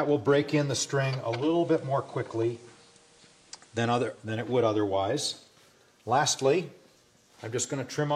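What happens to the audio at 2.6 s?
At 2.6 s the sound sits in a stretch of digital radio blending to analogue, running from 1.17 s to 4.52 s. The receiver lost its digital stream and cross-faded, over about 0.49 s, to the FM broadcast of the same station. A hiss floor appears, roughly 35 dB below the signal. The level drops by about 1 dB.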